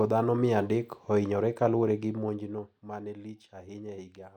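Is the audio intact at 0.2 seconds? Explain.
Yes, at 0.2 seconds the speech is intact, with no fault to be heard at that moment.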